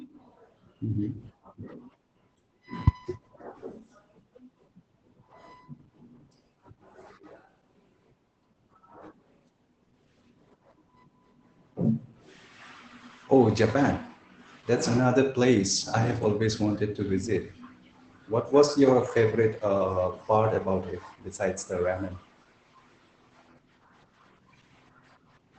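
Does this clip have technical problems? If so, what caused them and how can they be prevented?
Yes. Throughout the speech the Opus voice compression is plainly audible. The coder runs in its SILK linear-prediction mode at wideband, so it keeps a narrow band and codes the excitation coarsely, leaving the speech muffled, hoarse and slightly robotic, which fits a bitrate around 12 kbps. A spectrogram shows energy stopping abruptly near 8.9 kHz with nothing above it. To prevent it, encode at a higher Opus bitrate or use lossless capture.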